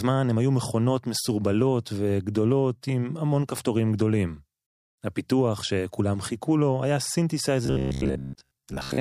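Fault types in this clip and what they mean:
Robotic sound from repeated short buffers: new audio likely arrived too seldom, so playback kept repeating its last buffer, which fits a length of about 15 ms, in place of skipped sound. From 7.66 s to the end, most of the speech becomes a rigid metallic buzz at 66.7 Hz.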